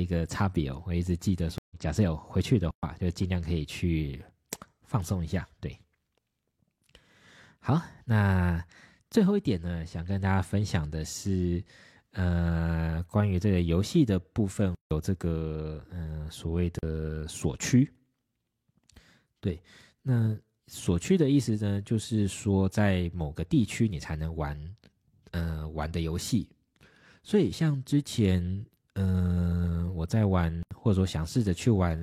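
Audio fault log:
1.58–1.76 s, stream reconnect: the speech drops out for about 122 ms as the connection breaks, then a fresh decoder picks the stream up again. It resumes roughly a tenth of a second further on, so a short piece of speech is skipped rather than merely silenced. The restart fades in softly instead of snapping back. That skip and the gentle return set it apart from a block of digital silence.
2.71–2.83 s, 14.75–14.91 s, 16.79–16.83 s and 30.63–30.71 s, block of digital silence: the speech cuts to silence for 120, 160, 40 and 80 ms, most likely because the output buffer was not filled in time. Each edge is an abrupt step. Unlike the reconnect, the speech returns with no fade-in.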